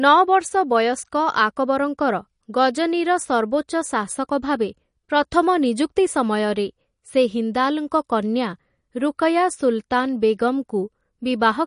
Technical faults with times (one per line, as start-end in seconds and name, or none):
0.00-11.67 MP3 compression